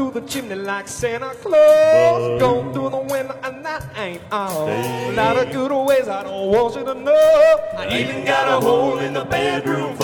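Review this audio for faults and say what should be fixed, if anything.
From 0 to 4.0 s the treble sounds synthetic and smeared, then detail returns abruptly with no gap, the pattern of an adaptive stream starting at a low bitrate. The early section fits HE-AAC near 20 kbit/s; after the switch it resembles AAC-LC around 96 kbit/s. On a spectrogram the upper band looks blocky and patchy before 4.0 s, then fills in cleanly up to about 14.9 kHz. Starting playback on a higher-bitrate rendition, or prefetching it before playback begins, would prevent this.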